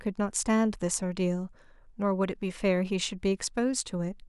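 Nothing goes wrong anywhere in this bit of speech, so there's no fault to point to.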